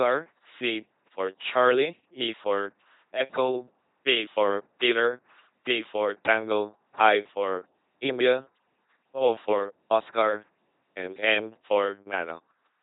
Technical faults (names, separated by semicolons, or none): LPC-10 vocoder